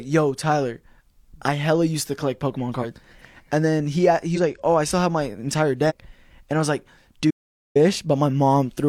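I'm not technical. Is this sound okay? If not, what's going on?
No. The speech has two kinds of problems.

First, compressed frames skipped, at 2.79, 4.32 and 5.86 s. The file is stored as short chunks of about 46 ms each, and some chunks never got played. At 2.79 s and at 4.32 s, between "and then he" and "like oh I still", about one chunk (roughly a twentieth of a second) is missing. At 5.86 s, after "still have my entire", about two chunks are gone.

Second, an audio dropout to silence from 7.31 to 7.76 s, right after "and I was like". For about 0.45 s the sound stops completely, with no background noise at all, and then it comes back mid-flow. Whatever was said during that gap is lost. The likely cause is that the input signal was briefly cut off, for example by a loose connection or an accidental mute, while the recording kept running.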